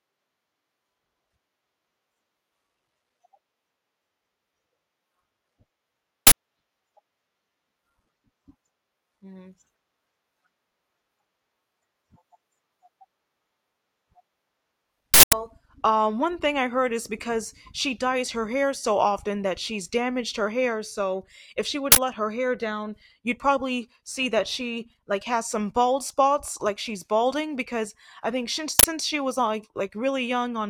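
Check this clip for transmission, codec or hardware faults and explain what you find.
Four loud bursts of harsh digital noise interrupt the speech, the mark of an uninitialised buffer fault. They occur at 6.27 to 6.32 s, 15.14 to 15.33 s (before "um one thing I"), 21.92 to 21.97 s (between "if she would" and "let her hair down") and 28.79 to 28.84 s (between "I think since" and "she was like"). Each block was sent to playback before any audio was written into it, so leftover memory played as samples. The 46 ms bursts fit a 2048-sample buffer, and the 186 ms one an 8192-sample buffer.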